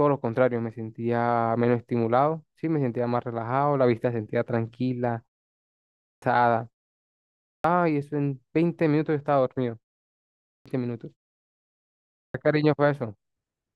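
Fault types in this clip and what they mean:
Clipped start after a pause: the output device idles during short silences and wakes late, swallowing about half a second of speech at 5.69, 7.12, 10.2 and 11.85 s. Unlike muted pauses, which silence only the gap, speech here bursts in missing its opening.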